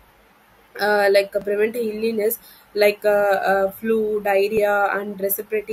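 A dropped buffer (overrun) is heard at 1.42 s and again at 4.57 s: each is a jump where the speech skips ahead by a few milliseconds with no gap. The likely cause is samples being overwritten before the program read them, splicing the surrounding audio together.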